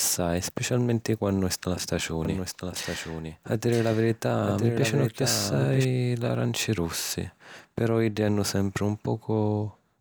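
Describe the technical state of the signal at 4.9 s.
At 4.9 s the speech carries a doubled audio track (2.25–5.85 s): a full-band copy, about 5 dB quieter, trails by roughly a second, likely from a second, slower capture path. On a spectrogram the same patterns repeat, shifted about one second, starting and stopping abruptly.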